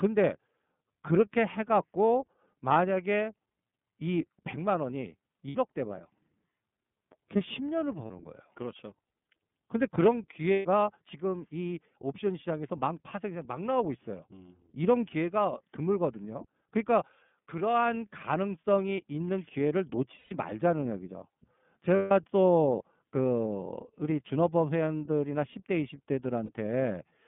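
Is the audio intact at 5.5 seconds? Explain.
No, not quite. From 5.48 to 5.55 s there's a dropout from lost iLBC frames, about 60 ms, which fits two missing 30 ms frames. The decoder covers the hole by repeating the last pitch cycle blended with noise, so you hear a short held, slightly buzzy, breathy vowel-like smear instead of real sound. Since each iLBC frame decodes on its own, the audio snaps back right after 5.55 s.

Around that moment the whole clip also carries the iLBC codec itself. The line is band-limited to roughly 150 Hz to 3.5 kHz, so everything above is gone and the speech sounds thin and narrowband. The codec damage is plainly audible: the speech is clear but has a rough, somewhat synthetic edge from how each 30 ms frame's excitation gets coded independently, which fits the 13.33 kbps mode.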